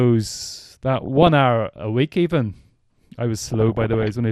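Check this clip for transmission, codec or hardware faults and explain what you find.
Two faults are present: a coded-audio degradation running through the whole clip, and two bursts of reception errors.

Throughout, the speech sounds dull and granular with a gurgling edge, most likely MP2 compression at a rate that fits about 80 kbps, starving upper sub-bands of bits.

From 0.93 to 1.27 s and from 3.51 to 4.06 s, DAB burbling: bit errors corrupt sub-band samples and scale factors, producing short noise blips in single sub-bands and sudden sub-band level jumps. The second burst is denser.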